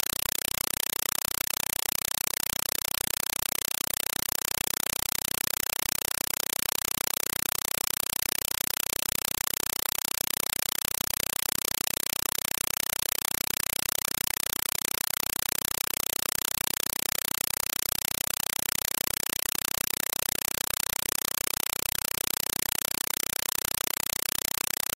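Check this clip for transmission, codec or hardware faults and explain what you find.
The whole clip is a compressed stream played as audio. An undecoded AC-3 bitstream, consistent with 192 kbps, sends 4 ms noise bursts 31.25 times a second, heard as loud chattering static: vertical broadband stripes on a spectrogram, blocks separated by silence in the waveform.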